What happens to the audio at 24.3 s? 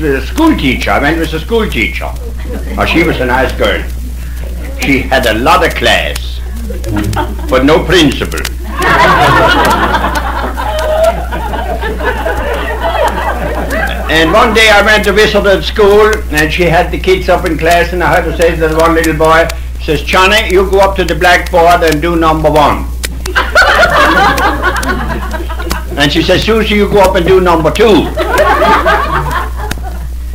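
At 24.3 s you're hearing hard clipping, and it isn't a one-off. It runs through the whole clip. The signal is being pushed about 14 dB past what the chain can carry, so the peaks get sheared off flat, on something like one sample in twenty. Those squared-off tops throw harmonics way up the spectrum, which is why every loud moment around there comes out as a harsh, gritty fuzz rather than clean peaks.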